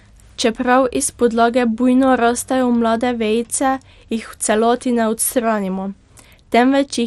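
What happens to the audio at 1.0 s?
At 1.0 s the speech carries the same dull, gurgling, granular distortion heard throughout, likely from MP2 compression at a low rate such as 64 kbps. Starved of bits, the sub-bands are quantised coarsely and upper bands switch on and off. A spectrogram shows flickering high-frequency blocks and nothing above 14.8 kHz.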